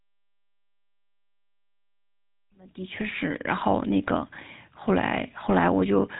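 A speech clip with GSM full-rate codec damage throughout. The sound is plainly buzzy and gravelly. Nothing comes through above 3.8 kHz, so the top end is dull and closed in. The codec rebuilds speech from a vocal-tract model fed by a coarse, thinned-out pulse excitation, which is what makes this roughness. The damage fits a 13 kbps GSM stream. An editor's fade-in runs from around 2.5 s to 3.52 s.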